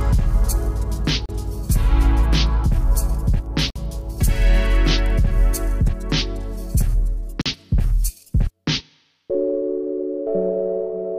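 Wireless packets were likely held up so the receiver's buffer ran dry, producing Bluetooth stalls: the sound drops to silence at 1.26 to 1.29 s, 3.70 to 3.76 s and 7.41 to 7.46 s, then resumes.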